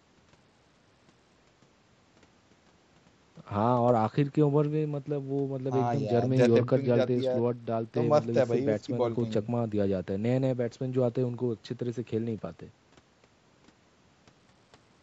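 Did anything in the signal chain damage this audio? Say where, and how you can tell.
Yes. The damage is at the codec stage, on the Bluetooth link. From 6.31 s to 8.01 s the speech turns dull and gritty, then clears. This is a Bluetooth SBC bit pool drop. The phone cut the bit pool to keep a congested link alive. The sound points to a fall from about 31 to 10, or roughly 77 kbps. The top sub-bands lose their bits and the rest are quantised coarsely. That dulls the treble and adds grainy noise. The lack of anything above 8 kHz comes from normal call microphone processing, not this fault.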